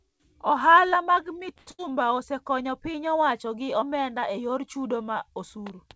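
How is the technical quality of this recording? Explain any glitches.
Two network glitches fall back to back in this speech, just before "osekonyo piny owacho gi". The band limit at 8 kHz, consistent with a 64 kbps G.722 call path, shows as an empty spectrogram above that line.

From 1.58 to 1.69 s there is a short stall from a late packet. The jitter buffer ran dry, so the receiver held the last sound for about 90 ms and then resumed without losing anything. It sounds like a slightly buzzy hold. On a spectrogram it appears as flat, repeated harmonics, and the waveform shows a regular, repeating cycle.

From 1.71 to 1.94 s comes a burst of packet loss. About 80 ms of audio never arrived. The receiver extended the previous sound by roughly 76 ms, fading it down, and then jumped ahead. It sounds like a fading hold followed by a small skip. The waveform shows a decaying envelope, and the spectrogram shows a smeared tail before an abrupt restart.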